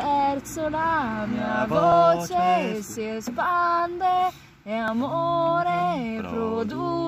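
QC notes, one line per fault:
1.92 s and 4.88 s, dropped buffer (overrun): an abrupt jump forward with no silent gap, the second skip longer. Likely samples went unread before being overwritten, losing roughly 40 ms and 70 ms, with the edges butted together.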